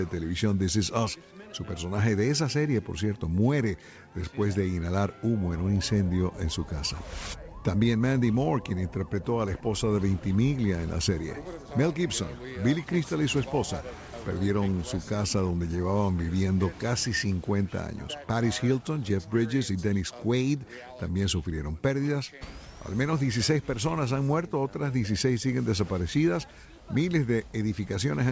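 No technical faults can be heard anywhere in the audio. It carries the character of a wideband call path, with nothing above 8 kHz, which fits a codec such as G.722 running at around 64 kbps.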